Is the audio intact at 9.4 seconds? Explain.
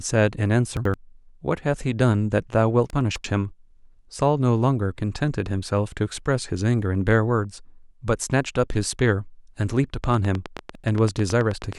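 Yes, at 9.4 seconds the speech plays through intact, with no dropout, click, distortion or other fault at that point.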